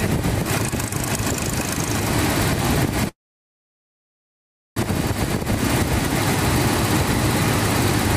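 A call audio freeze runs from 3.09 s to 4.79 s. The sound breaks off and the last instant carries on briefly as a fading buzz, then about 1.6 s of silence fills the rest of the gap. When the audio resumes it picks up exactly where it stopped, with nothing skipped, so everything after that point arrives about 1.7 s later than it should. The likely cause is packets stalling in transit until the jitter buffer ran dry.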